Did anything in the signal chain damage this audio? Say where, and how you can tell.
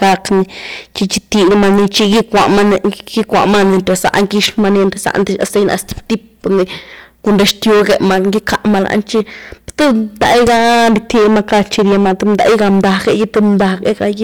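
Yes. A gain stage drove the speech about 18 dB past the converter or sample-format ceiling throughout, so roughly a fifth of samples hit the limit. The resulting hard clipping flattens every loud syllable, adding high harmonics heard as harsh fuzz.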